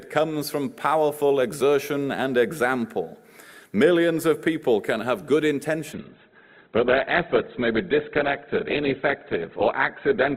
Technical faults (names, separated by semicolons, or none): adaptive stream at a lower bitrate